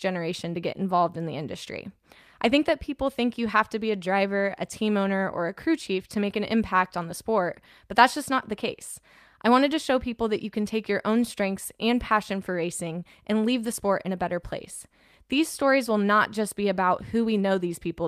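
No technical faults can be heard anywhere in the recording, and the signal stays steady and intact throughout.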